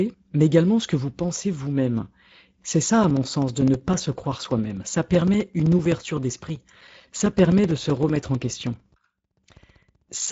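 The whole speech clip carries Speex codec damage: plainly hoarse and noisy, nothing above 7.6 kHz, which fits a mid-rate setting around 16.8 kbps. From 3.04 s to 10.28 s come periodic USB or driver dropouts. Every 64 ms a few milliseconds are silenced, so you hear a steady ticking through the sound.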